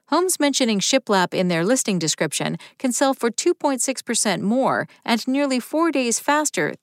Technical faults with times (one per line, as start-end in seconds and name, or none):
none